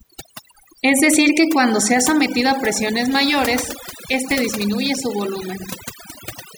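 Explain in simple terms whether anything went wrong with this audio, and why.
Overdone noise removal runs through the whole recording. A noise reduction tool was pushed too hard, so it shuts off any slice of the sound that comes close to what it judges to be background noise. Those gaps leave the pauses almost silent but sprinkled with small twinkling specks. The quieter parts of the speech get caught and removed along with the noise.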